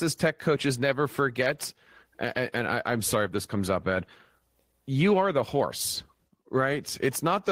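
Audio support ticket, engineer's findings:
No audible faults found on the speech recording. No action required.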